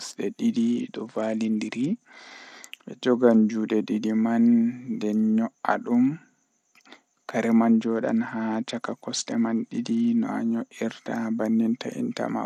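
From 0.53 to 2.29 s, and again from 7.84 to 10.21 s, the speech shows a Bluetooth SBC bit pool drop. The link apparently cut the encoder's allocation to save throughput, which fits a fall from a bit pool of 28 to about 10, near 84 kbps. Upper sub-bands lose their bits and the remaining bands are coarsely quantised, so the treble goes dull and a gritty noise rides under the speech until the rate recovers.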